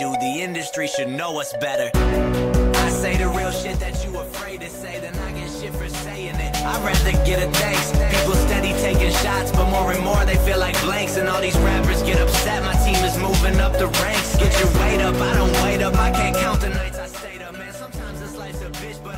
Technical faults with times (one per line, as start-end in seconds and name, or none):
16.45-17.15 zipper noise